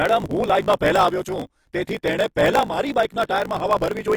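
Throughout the speech, the treble is likely rebuilt by HE-AAC compression, which fits a low bitrate of about 24 kbps. The upper band is copied from lower frequencies rather than coded, so s sounds turn gritty and lispy.

A block size mismatch (truncated) runs for the whole clip. One stage writes longer blocks than the next reads, consistent with 1024-sample writes, and each block's tail is dropped. The result is a steady 54.4 Hz buzz, with the speech running 1.16 times fast with its timbre kept.

Pre-echo appears at 0.79 s, 1.83 to 1.87 s, 3.07 to 3.10 s and 3.27 to 3.29 s. Codec noise sized for a sharp onset spills backward across its block, so a short hiss leads each attack by 19, 43, 32 and 31 ms, softening it.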